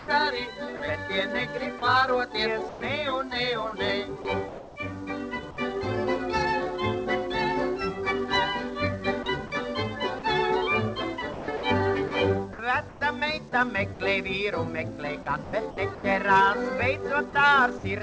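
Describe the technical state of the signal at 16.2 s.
At 16.2 s the audio sits within a stretch from 15.44 to 17.84 s that is chopped by the voice detector. Transmission likely switched on and off several times, and about 330 ms in total was replaced by comfort noise. It sounds choppy. On the waveform this shows as abrupt drops to a low, even floor. On the spectrogram the gaps appear as smooth, featureless noise patches, all capped at 8 kHz by the G.722 call codec.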